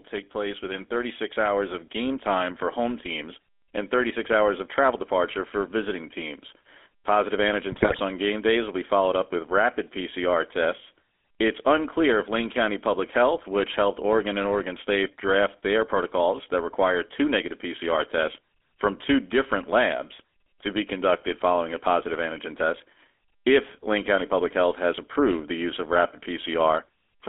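Speech passed through the GSM full-rate codec for its whole length. The band is confined to roughly 250 Hz to 3.5 kHz, so nothing above that reaches the ear, and the voice has the buzzy, gravelly grain of a coder that models the vocal tract and excites it with a sparse, regularly spaced pulse train. That damage is plainly audible and consistent with the 13 kbps full-rate coder. From 0.09 s to 6.54 s there is automatic gain rising. The gain control judged the input too quiet and lifted its gain gradually by about 8 dB over those six and a half seconds, so the voice and the background noise swell together rather than the speech alone getting louder. From 7.72 s to 8.01 s, just before "on game days will", there are GSM bit errors. The decoder received corrupted parameters on a poor radio link, and wrong filter, pitch and gain values distort the spectrum and level frame by frame. This turns roughly 0.3 s of speech into squawks, pops and gargling, which points to a fairly high bit error rate hitting a consecutive run of frames.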